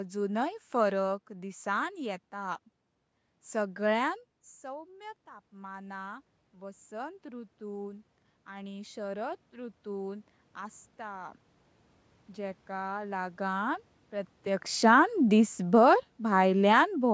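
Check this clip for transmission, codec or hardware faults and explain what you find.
Two automatic gain control faults stand out, one rising and one falling, both reacting to the talker's distance from the microphone.

From 4.61 s to 16.15 s the speech and the room noise behind it slowly swell together, climbing by about 9 dB. This is automatic gain rising. Around 4 s the talker moves away and the level reaching the microphone drops by about 15 dB. The gain control, judging the input too quiet, raises its gain over many seconds, lifting the background along with the voice.

From 14.72 s to 16.87 s the speech arrives too loud and then sinks back by about 4 dB, with the background sinking alongside it. This is automatic gain falling. Around 14 s the talker moves again, so the signal jumps while the gain is still raised from the earlier correction. The controller then reins its gain back in gradually, and the two adjustments overlap briefly.

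The call microphone path's band limit, with nothing above 8 kHz, can be heard in the muted top end.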